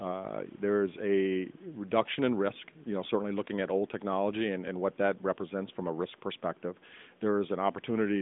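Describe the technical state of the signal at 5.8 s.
At 5.8 s the speech is intact, passing through the narrowband AMR mobile codec line as it does throughout, with no fault at that moment.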